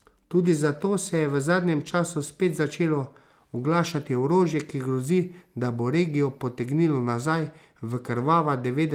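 Nothing stood out as a technical problem on listening to this speech recording.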